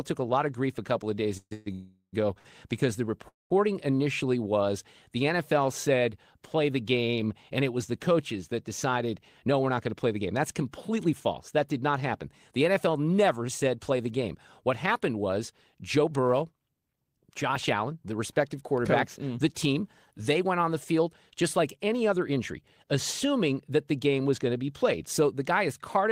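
Between 1.37 and 2.15 s the speech hangs three times in quick succession: 1.37 to 1.53 s, 1.53 to 1.68 s and 1.72 to 2.15 s. Each time the last sound is drawn out as a fading buzz, and in the first and third it drops to silence for about 50 and 80 ms before the speech resumes exactly where it stopped. These are call audio freezes, likely caused by packets held up in transit so that the jitter buffer ran dry. The receiver filled the waits, 136, 131 and 406 ms, and nothing is lost, but the speech now runs that much later.

At 2.39 to 2.47 s a single sound is held about 60 ms too long with a slight buzz. This is a short stall from a late packet: one packet missed its slot, and the receiver stretched the previous audio until it arrived, then carried on without losing anything.

From 3.29 to 3.52 s comes another freeze of 216 ms. It is mostly silence, about 180 ms, after a brief fading tail, and then the speech picks up where it stopped.

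From 9.46 to 12.53 s, and again from 13.41 to 22.85 s, the speech sounds slightly rushed at an unchanged pitch, running at about 107% of normal speed. This is jitter buffer speed-up. Having built up surplus delay, the receiver trimmed many tiny pitch-period slices to catch up. That removed roughly a fifth of a second in the first stretch and about 0.7 s in the second.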